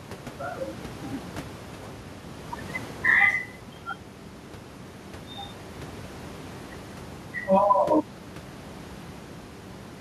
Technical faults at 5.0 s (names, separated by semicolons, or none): none